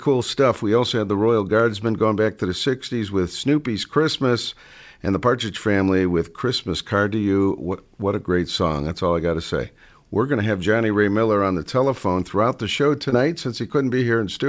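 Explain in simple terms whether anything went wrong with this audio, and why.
At 13.10 to 13.14 s there is a short concealed packet loss. About 20 ms of the speech never arrived, so the receiver filled the gap by extending the sound just before it.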